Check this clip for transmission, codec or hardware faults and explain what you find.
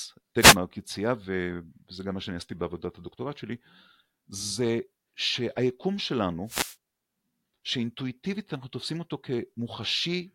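Two short wireless microphone noise hits occur, from 0.38 to 0.57 s and from 6.46 to 6.76 s. Each is a brief swish of static over the speech, the second lasting about 0.3 s. The analogue FM radio link fades as reflected paths cancel the direct signal at the receiver. Receiver noise then rises through the audio, and in the deeper part of a fade it breaks into clicks that briefly mask the speech.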